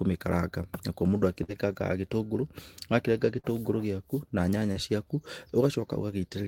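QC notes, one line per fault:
1.43–1.51 s, burst of packet loss: about 40 ms of audio never arrived, so the receiver carried the last sound on for roughly 50 ms while fading it down. On a spectrogram the band stretches flat and dims. Speech then resumes with a visible jump in content.
3.39–3.47 s and 4.72–4.79 s, short concealed packet loss: each time about 40 ms went missing and was bridged with roughly 40 ms of extrapolated sound, heard as a brief smear or wobble. A spectrogram shows harmonics or noise briefly smeared sideways, blending back without a hard edge.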